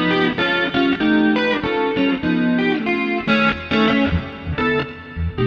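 From 4.06 to 4.46 s there are CD scratch ticks: four short clicks, roughly seven per second, each about a millisecond at most. A surface blemish defeats the disc's error correction once per revolution, so the player briefly patches or mutes the missing samples.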